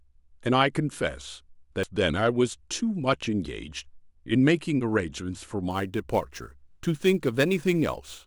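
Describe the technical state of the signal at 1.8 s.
At 1.83 s there is a single brief burst of damaged data in the compressed stream: corrupted bytes make the decoder misread a frame and resynchronise, unlike a plain dropout's clean silence.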